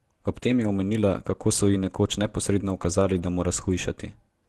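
At 0.39 s there is a brief smear, a tiny wobble lasting about 20 ms where the sound seems held rather than continuing naturally. This is short concealed packet loss: that slice of audio arrived too late for the decoder, so the receiver extended the preceding sound to cover the hole and then blended back into the real signal.

Straight after, from 0.43 to 0.69 s, just before "omenila kako so ji", the speech turns rougher and grainier for about 140 ms, with a fuzzy, noisier texture but no gap. The same roughness returns from 3.01 to 3.23 s, about 120 ms, right after "so ji nekoč neposredno". Both stretches are lost packets rebuilt from error correction. The lost packets were replaced by low-bitrate backup copies carried in the packets that followed. The timing fits a run of 20 ms packets. Those copies hold less detail, which produces the coarse sound. The Opus call path, whose high frequencies stop near 12 kHz, keeps the top end no wider during these stretches.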